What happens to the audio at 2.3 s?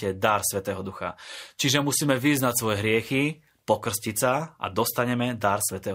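Nothing goes wrong at 2.3 s; the speech runs through that moment intact, with no dropout, click or distortion.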